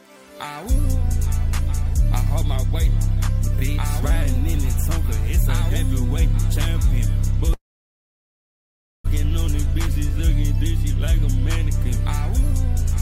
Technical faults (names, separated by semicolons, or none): call audio freeze